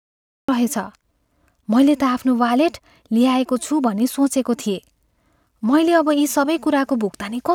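Cut-off start at 0.49 s: capture began late, so the speech emerges from digital silence mid-sound, with no natural attack or fade-in.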